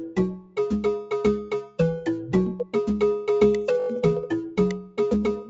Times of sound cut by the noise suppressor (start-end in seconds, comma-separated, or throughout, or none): 0.31-0.58, 1.41-1.79, 2.59-2.75, 4.78-4.99